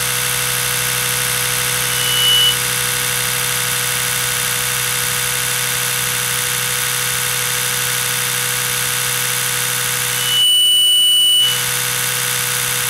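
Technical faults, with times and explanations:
10.08 to 11.79 s, loudspeaker feedback squeal: A single tone at 3 kHz swells out of the sound. It grows over a little under half a second and then holds, sitting a few dB above everything else. A microphone is picking up the loudspeaker it feeds. At 3 kHz the gain around that loop exceeds one, so the tone keeps reinforcing itself. It stops at 11.79 s.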